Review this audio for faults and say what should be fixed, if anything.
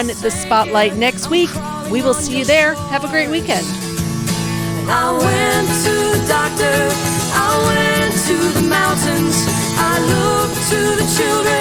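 A steady 100 Hz buzz runs through the whole clip, with the audio at essentially its normal speed and pitch. It comes from a block size mismatch (truncated): one stage writes longer blocks than the next reads, and each block's tail is discarded 100 times a second. To prevent it, match the block sizes configured on both sides of that handoff.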